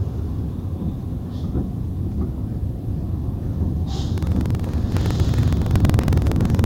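A recording of everyday sounds that develops buffer tearing from 4.13 s to the end: a rattling buzz at 21.5 Hz, which fits a 2048-sample buffer, where writer and reader cross each period and a small slice from about 150 ms earlier is spliced in. Waveform and spectrogram show regular hard joins as thin vertical broadband lines about 46 ms apart.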